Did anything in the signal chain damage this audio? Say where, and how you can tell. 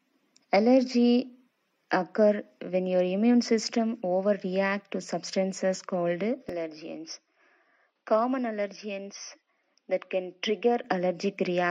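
Yes. From 6.49 s the sound turns dull and boxy, loses everything above 6.2 kHz, and drops about 5 dB, with no gap at the change. A faint new noise floor sits far below it. It clears at 10.84 s. At the capture stage, the input was likely switched to a poorer device.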